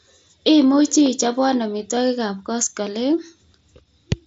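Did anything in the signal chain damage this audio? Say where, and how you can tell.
No, the speech carries only what a wideband Bluetooth headset link using the mSBC codec leaves behind: a band limit with nothing above about 7.7 kHz and a light codec graininess on louder passages.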